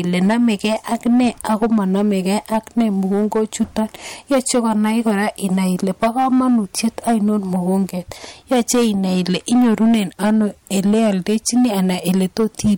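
From start to finish, the speech carries hard clipping: the signal was driven about 11 dB beyond what one stage could pass, so every peak is sheared flat, and something like one sample in fifteen sits against the ceiling. Those flat tops spray harmonics high into the spectrum, giving a harsh fuzz on each loud syllable. Unlike soft saturation, the edge is abrupt and gritty rather than warm, and it tracks level, not frequency content.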